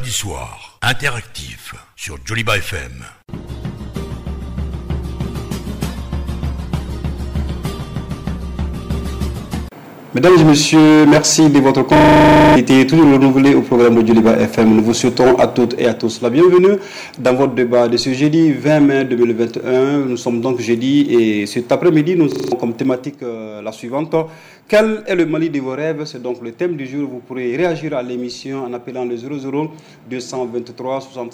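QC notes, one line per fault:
11.96–12.56 s and 22.32–22.52 s, system hang loop: a 40 ms piece repeats exactly 15 times and then 5 times, giving a steady 25 Hz buzz. The ring buffer kept replaying while the system froze, so about 0.7 s and 0.2 s of audio are missing afterward. Unlike random glitching, every repeat is identical.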